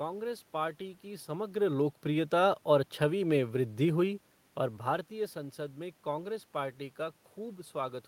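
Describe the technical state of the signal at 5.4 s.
At 5.4 s the signal is intact, with nothing wrong in the system's handling of the speech at that point.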